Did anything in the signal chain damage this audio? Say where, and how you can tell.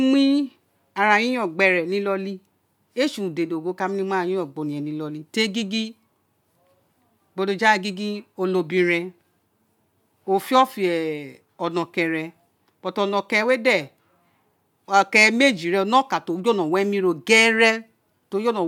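No, nothing in the signal chain damaged this recording.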